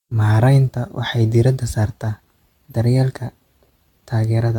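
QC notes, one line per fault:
Throughout: generation loss. The speech sounds swirly and hollow, with a smeared, watery texture and softened consonant attacks, and there is nothing above 17 kHz. The damage is heavier than a single encode at this quality would leave, which fits a chain of roughly seven AAC-LC passes at around 96 kbit/s. This is likely repeated decoding and re-encoding, each pass quantising on a shifted frame grid so noise and spectral holes pile up.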